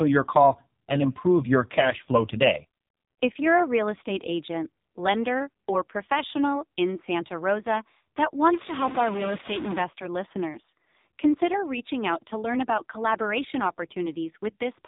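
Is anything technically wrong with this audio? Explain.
Yes. Throughout, the speech passes through the AMR narrowband mobile codec. Its pulse-driven vocal-tract model, at a rate that fits the 5.9 kbps mode, leaves the speech buzzy, synthetic and heavily damaged, with nothing above 3.8 kHz.

From 8.53 to 9.82 s, distortion appears, and quiet moments fill with noise. A stuck bit is the likely cause: one data bit is held fixed and shifts about half the sample values.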